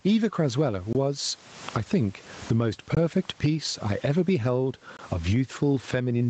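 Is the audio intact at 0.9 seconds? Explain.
No. At 0.93 s the speech drops into a gap between chunks that lasts until 0.95 s. The silence is 20 ms long. It fits audio sent in 2-second chunks, where the next chunk started late or carried padding. No sound is lost. The flow is simply broken, so it is heard as a brief clipped hole.

The same moment also carries gain pumping, which runs through the whole clip. The gain swings by around 20 dB. The likely cause is an input gain set far too high, with a fast limiter pulling the level down on every loud sound. The speech sounds squashed and flat in level.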